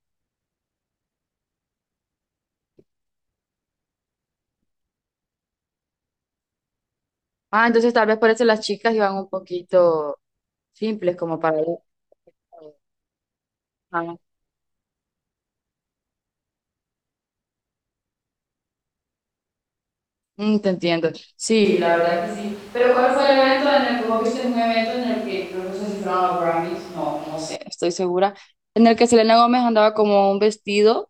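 At 21.65 s the speech abruptly turns roomy and hollow, thinner in the bass, roughly 5 dB quieter, with background noise rising to only about 25 dB below the speech. It snaps back at 27.56 s. This is a switch to a distant microphone, likely because the close microphone's feed dropped out and a farther one took over. Unlike a talker drifting off-mic, which changes gradually, the tone, level and noise shift together in a single step each way.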